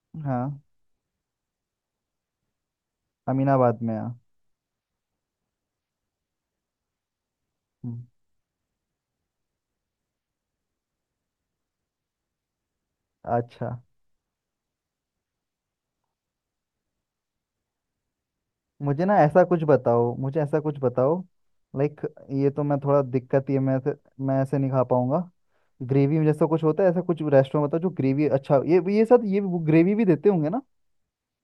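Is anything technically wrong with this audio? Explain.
No, nothing is technically wrong.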